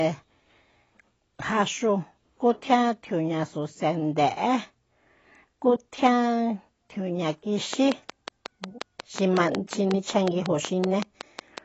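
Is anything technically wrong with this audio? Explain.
Yes, two faults. Throughout, the speech sounds dull and warbly with nothing above 7.9 kHz, the smeared texture of AAC compression, likely AAC-LC at a low bitrate around 24 kbps. From 7.73 to 11.59 s, a train of clicks: about twenty regular ticks at 5.46 per second, roughly 15 dB above the speech, likely interference or a faulty connection.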